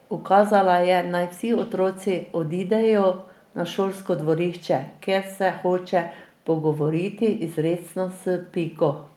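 A loudspeaker-side echo canceller likely let some of its microphone pickup through, causing an echo leak: at 0.01 to 0.09 s and 3.35 to 3.49 s, a very faint delayed copy of the speech, around 40 dB down, trails it by 321 ms as brief scraps.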